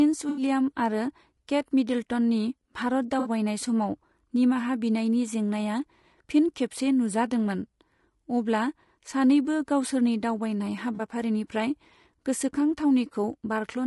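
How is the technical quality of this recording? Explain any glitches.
The technical quality is compromised by codec coarseness throughout and three brief dropouts.

Low-delay AAC compression, heard throughout, is the likely cause of the rough, grainy speech. Short frames resolve pitch harmonics poorly, which fits a bitrate around 32 kbps.

AAC frame loss with concealment occurs at 0.29 to 0.42 s, 3.19 to 3.29 s and 10.95 to 11.01 s. The decoder rebuilt the missing audio from the last good spectrum, leaving smeared, noisy patches lasting 80, 60 and 40 ms.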